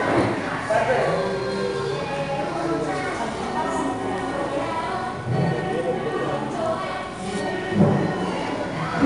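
Across the whole clip, 4-bit ADPCM compression leaves a gritty hiss that rises and falls with the sound's level. Quantised steps from the predictor cause it. Nothing is left above 10.6 kHz, consistent with roughly 89 kbps. There is no swirly, warbling perceptual-codec smearing.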